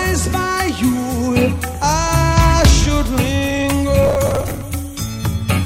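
From 4.03 to 4.61 s the audio breaks into processor overload crackle, a gritty tearing laid over the sound for a little over half a second. The processor kept missing its deadlines for buffers of around 10 ms, some few dozen in a row, and each miss replayed a scrap of old audio with hard edges. A single dropout gives one clean gap, but here the repeated splices produce a dense crackle that stops once the load clears.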